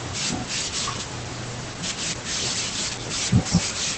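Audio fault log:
Throughout: Opus voice compression, plainly audible in the speech, with nothing above about 8.8 kHz; the low-rate SILK coding, which fits roughly 12 kbps, leaves it muffled, hoarse and slightly robotic.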